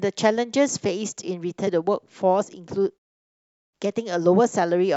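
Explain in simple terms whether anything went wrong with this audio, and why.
Around 1.64 to 1.68 s there's a quick glitch. That's damaged data in a compressed stream: the decoder lost its place and searched for the next frame.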